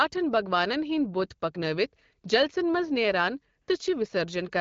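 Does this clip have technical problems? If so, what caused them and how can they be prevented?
Yes. AMR comfort noise appears from 3.61 to 3.67 s. For 60 ms the phone judged the talker silent and sent no speech frames, so the receiver inserted smooth synthetic noise. This shows as a flat, uniform band on a spectrogram and a steady low-level waveform. A longer voice-activity hangover would prevent it.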